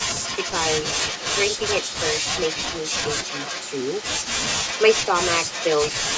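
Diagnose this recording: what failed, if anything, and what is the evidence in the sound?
A delayed copy of the speech trails it by about 370 ms, roughly 10 dB down, at 0.15–0.56, 0.82–3.05, 3.23–4.05, 4.43–5.1 and 5.47–5.92 s. This is echo leak in call processing: likely a loudspeaker-side echo canceller leaving microphone pickup uncancelled.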